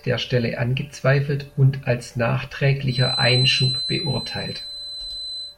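From 2.83 s to the end, a thin 4 kHz feedback whistle sits about 5 dB below the speech, likely a loudspeaker-to-microphone loop held just short of runaway.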